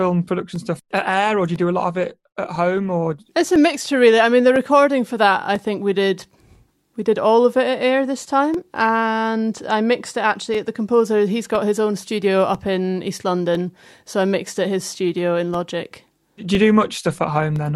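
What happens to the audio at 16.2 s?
Around 16.2 s the speech carries a regular tick, a brief gap that recurs every 1.0 s in a train running from 0.56 s to 17.56 s, so this moment sits inside that steady pattern. These are periodic USB or driver dropouts: a background task stalls the USB bus or the audio driver on a fixed cycle, and each stall loses roughly 2 ms of audio, replaced by silence. Those short holes in the speech are what the ear hears as clockwork clicks.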